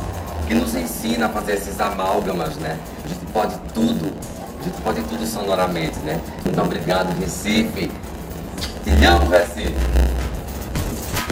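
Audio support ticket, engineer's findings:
Block size mismatch (padded), throughout clip. Steady buzz at 91.9 Hz, playback slowed to 0.919x with pitch roughly unchanged. Probable component: buffer handoff between stages. Upstream writes blocks about 8% short; zero-filled remainder inserts a gap each block, producing the buzz and the stretch.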